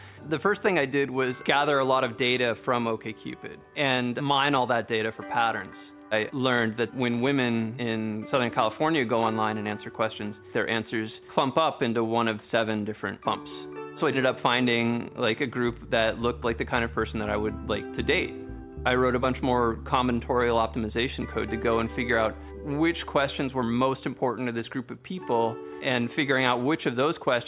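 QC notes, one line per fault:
Nothing stood out on listening to this audio.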